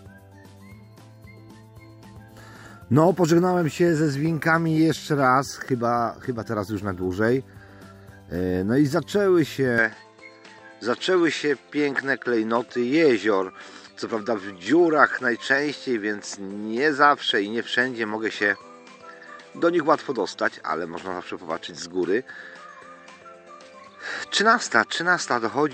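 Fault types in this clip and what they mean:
Input switched to a poorer device: from 9.78 s to the end the sound abruptly turns duller, with nothing above 8.5 kHz, and a faint new background noise appears well beneath it, while loudness stays about the same and there is no gap at the change. The likely cause is a switch to a lower-bandwidth microphone, rather than a plain filter or codec drop, because the noise floor changes character along with the bandwidth.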